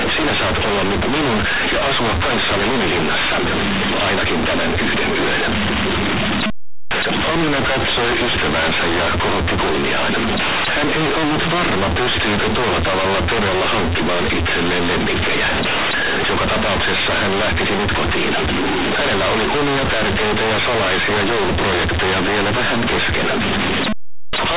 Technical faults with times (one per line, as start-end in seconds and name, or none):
0.00-24.56 companded audio read as linear